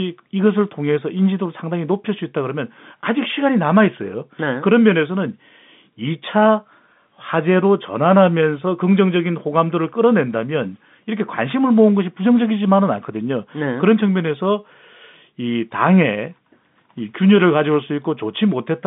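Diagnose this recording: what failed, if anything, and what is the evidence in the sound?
Nothing stood out on listening: the speech comes through the telephone line's narrow band, with nothing above about 3.8 kHz, and no stage of the chain gives any audible sign of failure.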